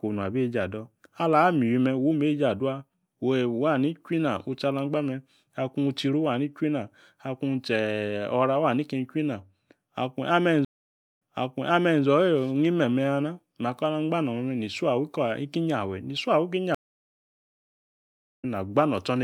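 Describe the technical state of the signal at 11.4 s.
At 11.4 s the stream connection has dropped and the player is reconnecting with a fresh decoder, a stream reconnect spanning 10.65 to 12.04 s. The speech cuts to about 0.56 s of silence, then resumes 0.84 s earlier, replaying material with a brief fade-in.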